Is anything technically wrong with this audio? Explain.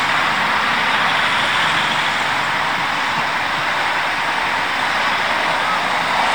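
No, nothing technically wrong can be heard in this audio.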